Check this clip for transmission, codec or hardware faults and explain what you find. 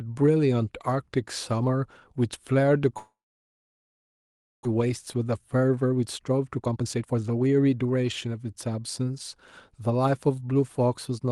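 Two faults stand out in this speech clip, one right after the other.

From 2.97 to 4.67 s the sound briefly carries on as a fading buzz or hiss, then goes silent for about 1.5 s before the speech resumes, with roughly a second of material simply gone. This is likely a long network dropout. No packets arrived, so the receiver extended the last sound, let it decay, and then had nothing to play. The late packets also left roughly 0.7 s of extra delay queued up.

From 4.75 to 8.35 s the speech runs at about 118% of its normal pace while keeping the same pitch, so it sounds rushed. This is a jitter buffer speed-up. To work off that backlog, the receiver repeatedly cut out short slices one or a few pitch periods long, discarding roughly 0.7 s in total.

Throughout, the Opus call codec limits the top end to about 12 kHz. That is normal behaviour for this path and not a fault.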